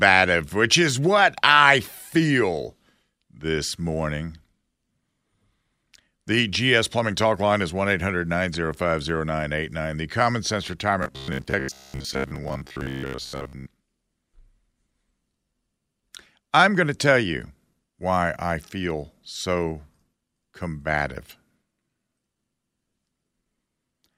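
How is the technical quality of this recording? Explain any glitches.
The recording has one clear glitch.

Robotic sound from repeated short buffers, 11.03 to 13.66 s: the speech turns into a stiff metallic buzz at 66.8 Hz, likely from a 15 ms chunk looped for most of that span.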